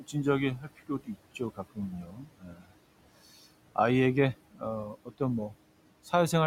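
Noise suppressor artifacts run through the whole clip. Steady room noise sits about 18 dB below the speech. The suppressor treats it as noise and pulls it down by about 18 dB, frame by frame. So the background sinks in the pauses and rises again under the speech.

Speech cut by the noise suppressor happens three times. The suppressor mistakes parts of the speech for noise and lowers them with it. From 0.58 to 1.18 s, about a third of a second drops by up to about 18 dB. From 1.75 to 2.72 s, nearly three-quarters of a second drops by up to about 19 dB. From 4.94 to 5.21 s, a brief moment drops by up to about 15 dB. Each of these stretches sounds swallowed or faint.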